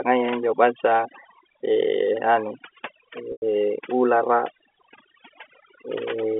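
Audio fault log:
throughout, overdone noise removal: The noise suppressor is set too aggressively, so any frequency band that drops close to its noise estimate is pulled far down or switched off entirely. The background falls to near silence scattered with twinkling specks, and the softer components of the speech get cut along with the noise. This sits on top of a telephone band of roughly 250 Hz to 3.4 kHz from the G.711 A-law line.
3.32 to 3.42 s, packet loss with pitch repetition: About 100 ms of audio goes missing, which fits five 20 ms packets. The receiver bridges the hole by repeating the last pitch period, producing a brief held, buzzy tone. Because the gap is longer than the concealment can sustain, that repetition fades out into silence partway through, and the speech comes back with a short cross-fade rather than a clean restart.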